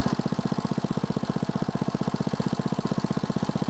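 No technical faults are present; the audio is band-limited to about 8 kHz, consistent with ordinary call microphone processing and an Opus-coded WebRTC call path at a wideband setting.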